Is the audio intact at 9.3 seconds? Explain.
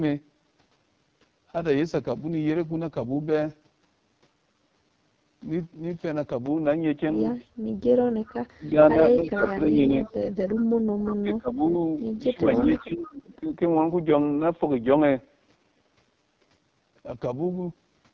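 No. At 9.3 seconds four faults overlap.

The speech sounds rough and raspy across the whole recording, with a gritty, buzzy texture rather than clean consonants. This is the AMR wideband (HD Voice) codec at 6.6 kbit/s, one of its lowest rates. At that rate the pulse-driven vocal tract model has too few bits to follow the voice accurately, so the excitation comes out coarse, and the top band, which the codec fills with shaped noise, adds to the hiss-like roughness.

From 6.46 to 16.15 s the sound is dull and boxy, with a level shift of around 5 dB, and a faint new noise floor far below the speech. The change comes with no gap. The likely cause is that the input switched to a poorer device partway through the call, such as a headset's call profile with a narrower band and a different tone. Before the switch, nothing reached above 8 kHz.

Between 8.54 and 9.94 s the voice dips by as much as about 20 dB in pieces, for well over half a second in total. 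The likely cause is speech suppressed in double talk. With both sides talking at once, the echo canceller could not tell this talker apart from the loudspeaker echo, so it turned the outgoing signal down.

Starting at 9.25 s and running to 11.14 s, a copy of the voice trails the original by 324 ms, roughly 10 dB below it. This is likely an echo leak. A loudspeaker on one end fed its microphone, and that end's echo canceller let part of the pickup through and sent it back.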